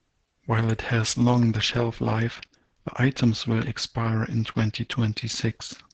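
Throughout the speech, Opus voice compression is running in its SILK linear-prediction mode at wideband, and the damage is heavy. Nothing survives above 8.8 kHz, so a spectrogram shows a flat ceiling with empty space above it. The excitation is coded coarsely, which fits a bitrate near 10 kbps. The result sounds muffled, hoarse and faintly robotic.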